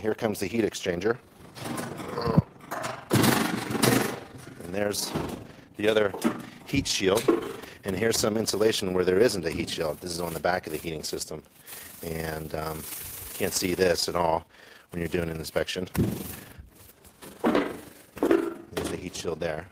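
Overlap-add ripple runs through the whole clip: the level swells and dips about 20 times a second, with a depth of about 6 dB, heard as a fast, rough flutter over all the audio. The audio was split into windowed frames and rejoined with an overlap whose gains don't sum to a constant, so each frame boundary leaves a periodic dip. On a waveform the envelope looks evenly scalloped; a spectrogram shows regular vertical banding at that roughly 20 Hz rate.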